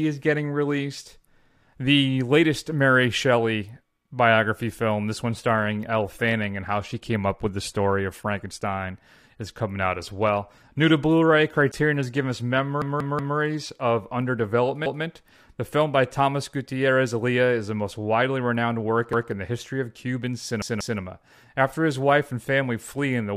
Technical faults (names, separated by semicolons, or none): adaptive stream at a lower bitrate; repeated buffer